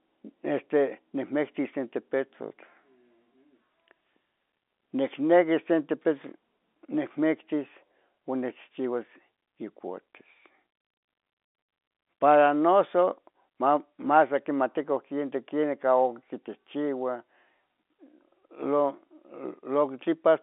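No technical faults can be heard in this recording.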